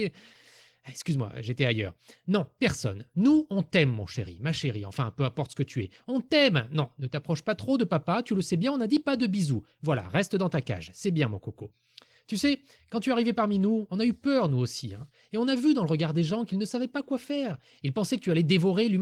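Nothing stood out on listening to this speech recording.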